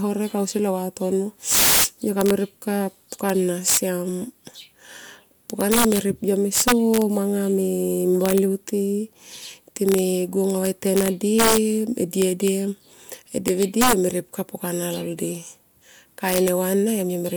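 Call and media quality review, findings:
Integer overflow throughout the speech: violent cracks on loud peaks, signal driven about 15 dB over, wrapping to opposite sign on around one percent of samples; far sharper than clipping's flattened tops.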